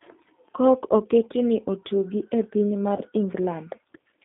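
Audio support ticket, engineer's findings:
G.729 codec throughout: rough, slightly synthetic speech, band limited to about 200 Hz to 3.6 kHz. Pulse-coded excitation at a rate consistent with 8 kbit/s G.729A.

VoIP packet loss concealed by the speech codec, 2.97 to 3.02 s, after "otugi ne piny mar". Stretched, fading sound where the decoder extrapolated; the gap fits one lost 20 ms packet.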